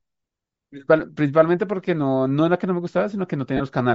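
It's a speech clip, and the whole thing has a breathy, grainy edge with a noisy, smeared top end, which is likely Bluetooth LC3 compression at a low rate, something like 32 kbps with 10 ms frames, where the codec throws away upper spectrum and fills it back in with noise. Then there's a brief dropout from 3.57 to 3.61 s: lost LE Audio frames, about 30 ms worth, so roughly three 10 ms frames. The decoder papers over the gap by repeating the last spectrum with scrambled phase, so the sound turns into a short noisy smear rather than dropping to silence.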